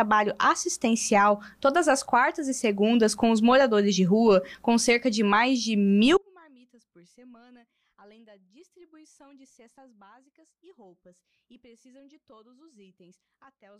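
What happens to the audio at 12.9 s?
At 12.9 s the audio is in a dropout to a faint residue, from 6.17 s to the end. The signal likely broke while the path stayed live, leaving only a faint leak about 35 dB down, abruptly, unlike a fade.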